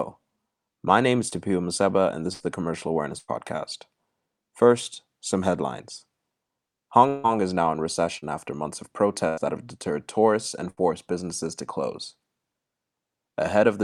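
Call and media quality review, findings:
Repeated packet loss (robotic sound), 1.29–3.30 s after "my name is" and 7.08–9.39 s ending before "that have". Choppy speech with pieces missing. Three gaps per stretch (longest 99 ms, then 157 ms), about 10% and 12% concealed. Network loss/late arrival at jitter buffer; concealment extends prior audio.

Burst of packet loss, 10.70–10.79 s, just before "businesses to close". Brief held, decaying fill, then speech resumes with about 80 ms missing. Consecutive packets lost or late on network path; receiver concealment repeats last sound, fading across gap.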